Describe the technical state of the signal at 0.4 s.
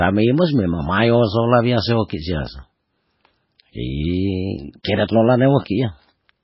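At 0.4 s the speech carries the same heavy damage as the rest of the clip: nothing above 5.5 kHz, with watery, swirling texture and smeared onsets. The likely cause is MP3 compression, consistent with a very low bitrate around 16 kbps, where the encoder cuts treble and drops weak frequency lines from frame to frame.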